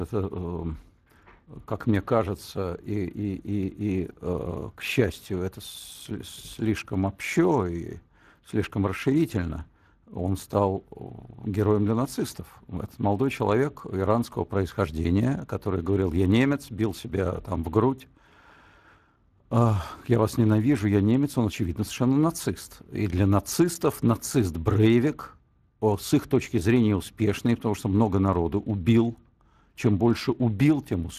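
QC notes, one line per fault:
throughout: Speex codec. The speech has a noisy, hoarse grain because the CELP coder is short of bits to rebuild its excitation, and nothing comes through above 15.3 kHz. The damage is plainly audible and fits a mid-rate setting around 22 kbps.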